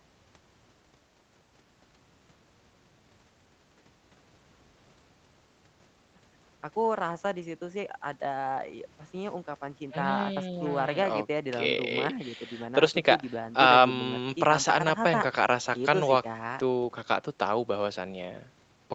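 Speech clip with no technical faults to report.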